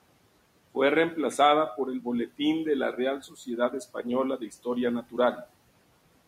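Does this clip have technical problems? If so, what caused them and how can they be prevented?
Yes. Between 3.23 and 3.47 s there is speech cut by the noise suppressor. It mistook part of the speech, quiet beside room noise about 23 dB lower, for noise. It dipped by about 13 dB, for roughly a tenth of a second, so sounds are swallowed. Gentler suppression settings would prevent this.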